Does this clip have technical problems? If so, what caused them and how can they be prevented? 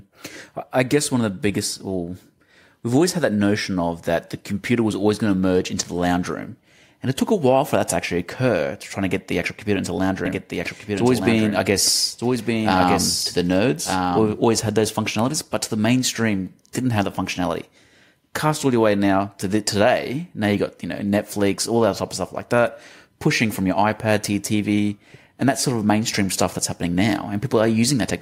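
Yes. A doubled audio track runs from 10.26 s to 14.38 s, starting just after "computer into the lounge" and ending just before "always had those functionalities". A second, full-band copy of the speech trails the original by about one second and sits roughly 5 dB lower, with no reverb or tonal change. It cuts in and out abruptly. The likely cause is the signal being captured twice, once through a slower path, or an edit leaving two offset copies on the timeline. To prevent it, route each source through a single capture path and check overlapping regions after editing.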